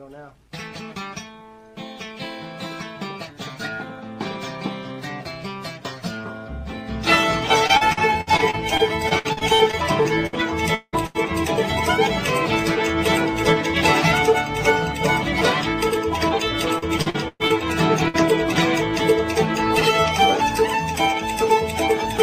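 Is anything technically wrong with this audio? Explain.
Yes. The audio has three kinds of network fault.

From 7.67 to 10.35 s there is repeated packet loss (robotic sound). Fifteen gaps are patched by repeating the last sound. About 0.5 s is missing. The longest gap is 59 ms. The result is choppy and robotic. It returns from 16.78 to 17.52 s with five gaps, the longest 116 ms, and about 260 ms lost.

From 10.75 to 10.95 s the sound is stretched out and fades, ending in about 50 ms of silence. About 180 ms of audio never plays. The likely cause is a long network dropout. The receiver kept extending the last sound until it ran out.

There are two bursts of packet loss. At 11.07 to 11.16 s about 80 ms is missing. At 18.08 to 18.16 s about 60 ms is missing. Each gap is filled by continuing the last sound and fading it. Then the audio jumps ahead.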